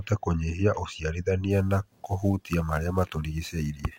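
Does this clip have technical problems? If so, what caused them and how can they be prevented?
Yes. From 1.51 s to the end, sample clock jitter adds a roughness to the speech that is loudest on bright, loud sounds. Timing errors of around 10 microseconds leave hiss roughly 30 dB down. Prevent it with a clean, stable converter clock.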